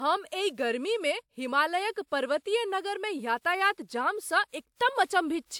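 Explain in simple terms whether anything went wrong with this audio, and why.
Throughout, the speech sounds swirly and hollow, and the starts of sounds are softened. This is generation loss: the audio was likely compressed with a lossy WMA-type codec about three times over, each pass stacking fresh damage on the last.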